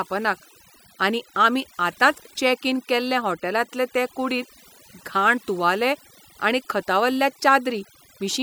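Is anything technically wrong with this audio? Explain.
Yes. The speech has overdone noise removal running through the whole clip. A noise reduction stage was set far too aggressively for the noise it faced, so any frequency band sitting close to its noise estimate gets pushed down hard or shut off entirely. The quieter components of the voice fall below that threshold and vanish along with the noise. What remains is a lowered background dotted with twinkling specks.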